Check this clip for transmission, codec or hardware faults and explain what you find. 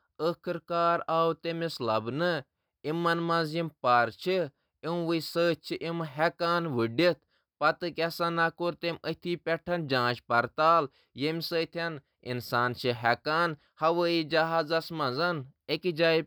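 Nothing stood out on listening to this speech recording.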